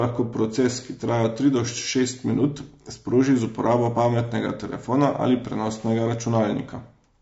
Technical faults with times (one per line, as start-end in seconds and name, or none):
0.00-7.22 low-delay AAC compression